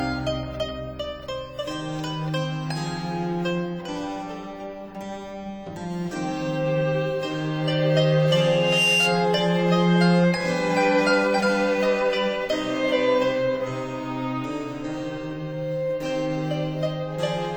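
At 8.39 s a loudspeaker feedback squeal kicks in: the mic is hearing its own speaker, and at 2.8 kHz the loop gain tops one. The tone swells over a bit under half a second, peaking a few dB above the sound, then stops at 9.22 s.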